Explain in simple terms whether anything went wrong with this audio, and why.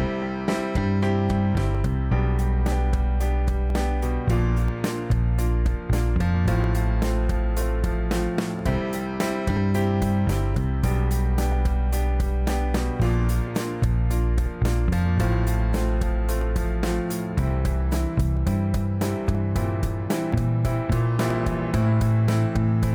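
A click lands about every 0.98 s from 0.77 s to 22.28 s, likely clock drift buffer slips: two mismatched clocks forcing a few dozen samples dropped or repeated.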